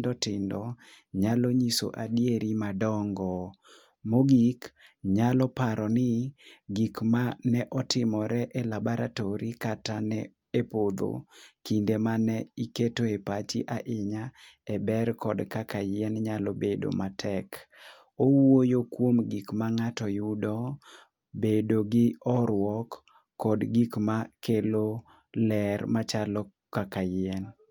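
Listening through the speech recording, nothing stood out as a technical problem at any point.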